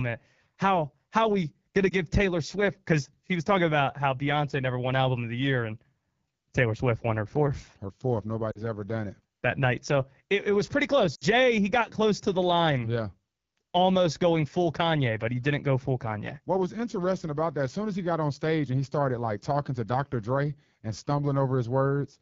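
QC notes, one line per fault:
Throughout: AMR wideband (HD Voice) codec. The speech is carried by AMR-WB at 8.85 kbit/s, one of its lowest rates, where the pulse-excited vocal tract model has too few bits to match the waveform closely. The result is a plainly audible rough, raspy texture on the voice. The top band from 6.4 to 7 kHz is filled with shaped noise rather than real detail.
1.89 to 1.94 s: lost AMR speech frames. One speech frame, 20 ms of audio, failed its radio checksum right after "how we gonna". The decoder concealed the gap by repeating the last good pitch and vocal tract settings at reduced gain. This gives a brief dip or warble in the sound.
8.51 to 8.63 s: lost AMR speech frames. Two consecutive frames, 40 ms in all, were lost just before "ever done it that". The concealment stretched the previous frame's parameters while the gain fell, so the sound fades toward near silence. 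It comes back weak or rough for a moment afterwards.
11.15 to 11.24 s: lost AMR speech frames. Three frames, 60 ms, were lost between "it was pretty close" and "he got close to". Repeating the stale parameters with quickly dropping gain, as wideband concealment does, drops the sound to near silence within two frames. Speech then resumes briefly weakened or rough.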